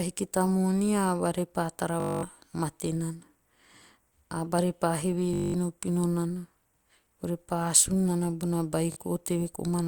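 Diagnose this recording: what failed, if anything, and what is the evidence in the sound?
Bluetooth stutter on the wireless link at 2.00–2.23 s (before "mate nana"), 5.34–5.54 s and 8.92–8.96 s: replayed buffer slices show as repeating waveform blocks, then audio jumps ahead.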